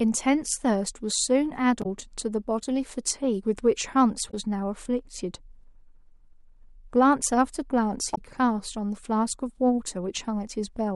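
Speech with damaged data in the compressed stream at 1.82–1.86 s, 4.29–4.34 s and 8.13–8.18 s. Each is a brief glitch of about 50 ms where corrupted frames are misread or discarded and the decoder loses sync until it finds the next valid frame header.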